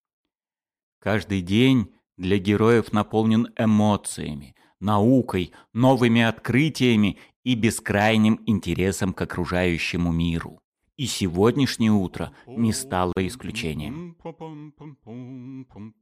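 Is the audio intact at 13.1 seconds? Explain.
No. A gap at a join of encoded pieces opens from 13.13 to 13.17 s. Separately encoded pieces were joined untrimmed. A gap of about 42 ms cuts in, its edges smeared so the silence is shorter, then the sound resumes.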